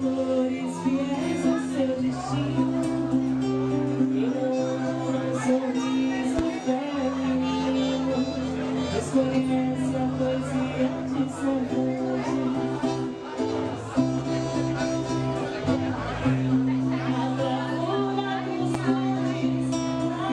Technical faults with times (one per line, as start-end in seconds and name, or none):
6.39-6.41 loud pop
18.74-18.77 loud pop